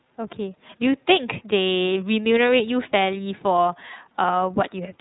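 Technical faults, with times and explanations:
Throughout, iLBC codec: the speech is band-limited, with nothing above 4 kHz, and has a rough, slightly synthetic grain. Each frame's excitation is coded separately, and the texture fits the 30 ms mode at around 13.33 kbps. The damage is plainly audible.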